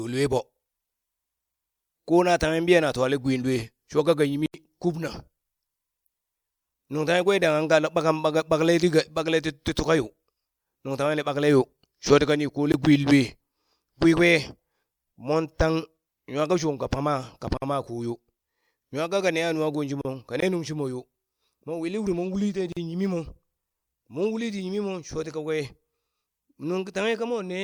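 Blocks of digital silence interrupt this speech recording at 4.46–4.54 s (80 ms), 12.72–12.74 s and 20.40–20.42 s (20 ms each). Samples were replaced by zeros, likely because the output buffer wasn't filled in time. The sound drops out and returns with no fade. The longest block is heard as a short hole. Gaps at joins of encoded pieces open at 17.57–17.62 s (about 49 ms), 20.01–20.05 s (about 35 ms) and 22.72–22.77 s (about 42 ms). Separately encoded segments were joined without trimming each encoder's start-up delay and final-frame padding. Brief silences with smeared edges break the speech, which then resumes from where it stopped.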